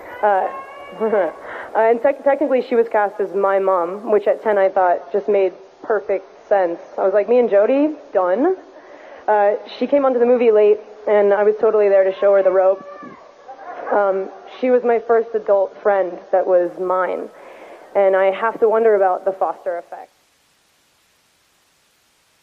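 An adaptive stream at a lower bitrate runs from 4.65 to 16.65 s. When the connection slowed, the player switched to a lower-bitrate rendition. The sound's quality changes suddenly at both boundaries, with no gap. Nothing above 6.9 kHz survives, so the top end goes dull, and codec artefacts thicken. That points to a fall from a high-quality AAC stream to roughly 24 kbit/s. The smooth fade out near the end, finishing at 20.4 s, is clean.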